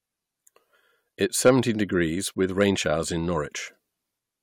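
From 1.46 to 1.51 s, just before "degrees with", hard clipping cuts the speech peaks flat after about 4 dB of overdrive, giving a brief crackle. The waveform shows squared-off tops, and the spectrogram a vertical smear of high harmonics.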